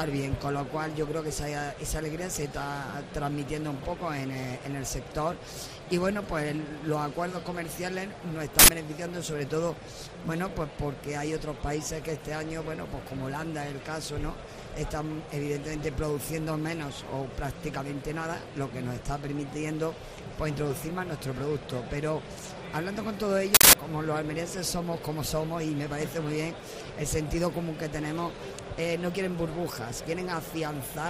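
Uninitialised buffer at 8.59 s and again at 23.55 s: blocks were played before being filled, so stale memory emerged as loud digital noise bursts lasting 93 ms and 186 ms, fitting 4096- and 8192-sample buffers.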